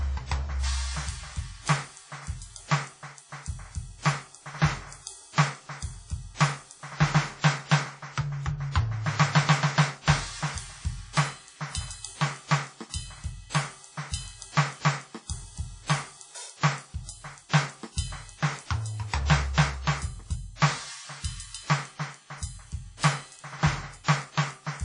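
Throughout the music, a low-bitrate transform codec, likely WMA compression at around 32 kbps, discards weak spectral detail and smears its quantisation noise over long blocks. Nothing survives above 10.1 kHz, so the top sounds dull, while a ringing, washy hiss swells and fades with the music.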